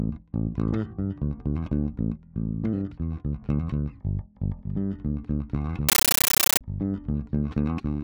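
From 5.89 to 6.61 s, a compressed stream is played as audio: an AC-3 bitstream reaches the output undecoded and is treated as plain PCM samples. Each coded frame becomes a 13.3 ms burst of noise followed by silent padding, repeating 31.25 times a second, and the dense bursts suggest a high-rate stream around 640 kbps. The result is a harsh, very loud, rapidly chattering static replacing the sound for that stretch.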